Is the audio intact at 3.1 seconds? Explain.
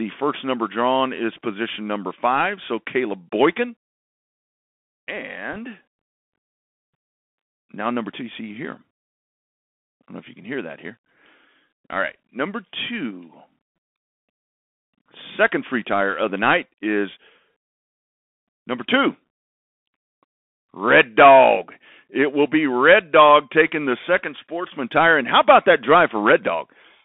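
No. At 3.1 seconds the speech carries Bluetooth CVSD headset codec damage, present throughout the clip. Each sample becomes one up-or-down bit, consistent with a 64 kbps stream, and the step size adapts. Only about 250 Hz to 3.5 kHz survives. S sounds turn scratchy over a granular hiss.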